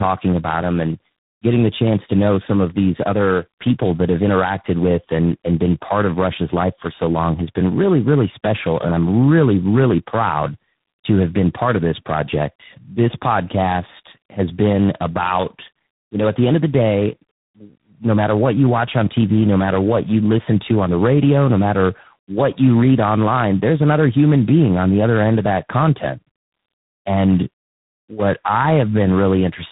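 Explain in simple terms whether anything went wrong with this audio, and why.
Something did go wrong: the speech has tandem speech coding throughout. It sounds like it passed through three speech coders in a row, each squeezing the already damaged output of the last, so it comes out rough, muffled and warbly, with nothing above 3.8 kHz.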